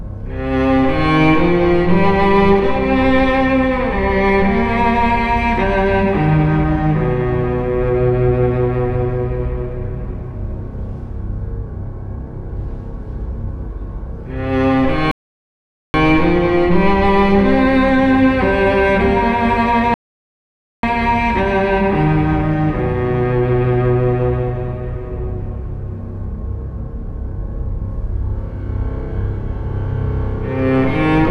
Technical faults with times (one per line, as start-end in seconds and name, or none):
15.11-15.94 rebuffering stall
19.94-20.83 rebuffering stall